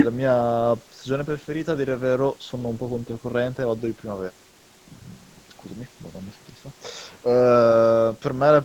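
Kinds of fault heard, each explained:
Switch to a distant microphone: from 5.92 s speech turns roomy and about 5 dB quieter, likely a far mic; waveform steps down, spectrogram gains reverb smear and noise floor.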